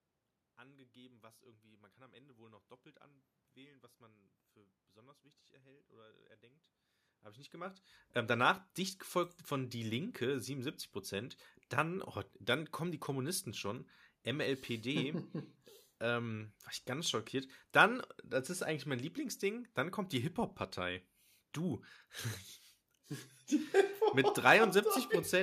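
No technical faults are audible.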